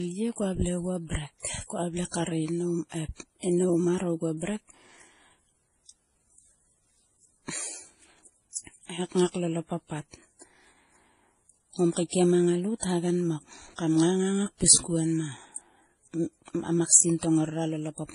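Throughout this 18-second speech clip, nothing reaches above 11 kHz, and several distinct kinds of compression damage are heard together. That mix is the giveaway for transcoding between lossy codecs, rather than one starved encoder, which would leave a single consistent artefact character. The layering likely comes from a low-bitrate MP3, then HE-AAC, then Vorbis, each re-encoding the previous damage.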